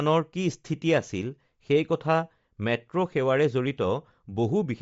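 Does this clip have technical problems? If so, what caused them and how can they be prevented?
Yes. Throughout the speech, the sound has a plainly audible grainy, breathy edge, and nothing is present above 7.7 kHz. This is likely Bluetooth LC3 compression. The codec works in short frames, consistent with 10 ms, and the damage fits a low rate of about 32 kbps. At that rate it discards much of the upper spectrum and fills gaps with noise, producing this texture and the hard band limit. To prevent it, record over a wired link or use a higher LC3 bitrate.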